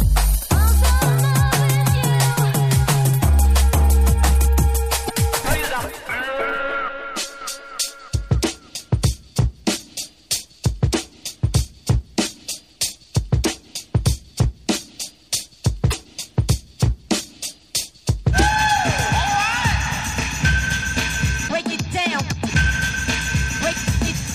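Damaged data in a compressed stream breaks the audio from 5.03 to 5.11 s and again from 15.87 to 15.94 s. At each point the decoder hits corrupted frames it cannot read properly, loses sync and hunts for the next valid frame header.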